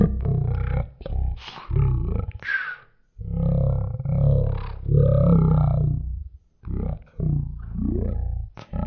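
From start to finish, the speech runs at one third of its proper speed. That is a wrong sample rate fault. The samples are being read out far more slowly than they were captured, with no conversion between the two rates. Speed and pitch fall together by the same ratio. Everything drops about 19 semitones, well over an octave and a half. Voices turn deep, slow and dragging. The ratio fits 48 kHz audio played back at 16 kHz.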